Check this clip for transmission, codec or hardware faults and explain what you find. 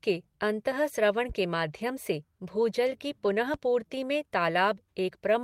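Three faults are audible in this speech: two loud pops and one lost packet rebuilt from error correction.

Loud pops occur at 1.29 to 1.33 s and again at 3.54 to 3.58 s, each a single sharp thump peaking about 5 dB above the speech, which carries on underneath. The likely cause is a sudden voltage step or pulse, such as a plug, switch or static discharge, entering the chain, with later circuitry shaping it into a brief jolt. On a waveform each appears as a tall, isolated spike about 35 ms wide. A spectrogram shows a thin vertical stripe across the whole frequency range.

A lost packet rebuilt from error correction falls at 3.25 to 3.27 s, a 20 ms stretch that fits a single lost packet. The next packet carried a low-bitrate backup copy of the missing audio, and the decoder played that copy instead of leaving silence. There is no gap, but the speech there turns briefly rougher and noisier. 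The waveform stays continuous. The spectrogram shows one frame-width block whose harmonic detail looks coarser and smeared, with more noise filling between the harmonics.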